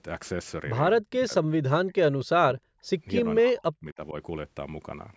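From 1.0 to 1.32 s, 1.5 to 2.77 s and 3.19 to 4.15 s, the speech dips and breaks into pieces, falling by around 40 dB at worst. This is likely speech suppressed in double talk. The echo canceller could not separate the talker from overlapping far-end echo and turned both down.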